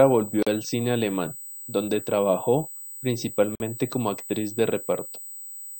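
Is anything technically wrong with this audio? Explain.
Yes, there are two problems.

A steady USB whine runs through the whole clip, a fixed tone at 8 kHz with its strongest component up at 16 kHz, roughly 15 dB below the speech. That's the bus's 125-microsecond microframe current pulses leaking into the audio through power or ground.

There are also two gaps at joins of encoded pieces: a 40 ms dropout from 0.43 to 0.47 s and a 50 ms one from 3.55 to 3.60 s. The speech drops out and picks up where it left off, which is what you get when separately encoded chunks are joined without trimming their built-in start delay and end padding.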